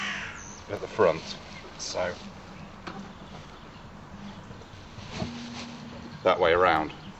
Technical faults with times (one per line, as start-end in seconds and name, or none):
none